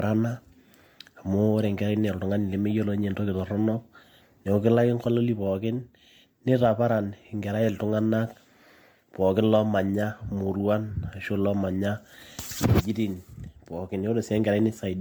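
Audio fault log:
Throughout: generation loss. The speech sounds swirly, smeared and hollow, and consonant attacks blur. This likely comes from around ten rounds of MP3 encoding near 97 kbit/s. Each round requantises on a shifted frame grid, so noise and spectral holes accumulate.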